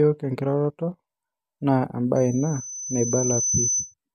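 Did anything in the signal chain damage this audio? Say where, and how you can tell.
Yes. A loudspeaker feedback squeal runs from 2.16 s to 3.94 s, arising in the acoustic and analogue stage where the microphone picks up the loudspeaker it feeds. A single tone at 6.1 kHz swells over about a second and a half until it sits at roughly the same level as the speech. At that frequency the loop gain has passed unity, so each trip around the loop reinforces the tone until the loop is broken.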